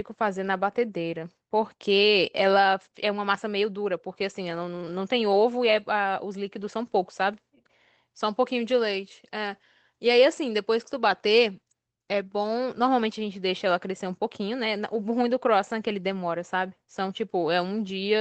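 No technical faults are audible anywhere in this recording.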